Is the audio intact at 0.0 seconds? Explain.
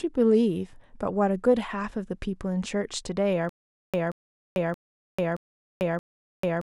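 Yes, at 0.0 seconds the audio is intact, with no dropout, glitch or other fault at that moment.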